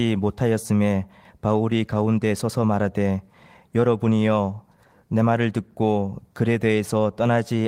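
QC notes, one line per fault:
No fault found.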